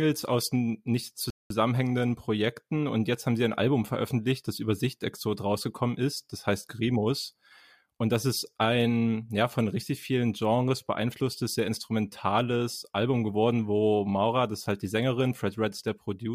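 A rebuffering stall interrupts this speech clip from 1.30 s to 1.50 s, just after "aus nicht". The player exhausted its store of downloaded audio and halted playback, leaving a gap of silence about 0.2 s long until enough new data had arrived to continue. When the sound returns, it picks up at exactly the point where it stopped, so nothing is skipped or repeated, but the pause adds roughly 201 ms to the running time.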